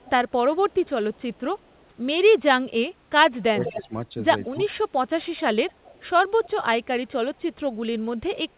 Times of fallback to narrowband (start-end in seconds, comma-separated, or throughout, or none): none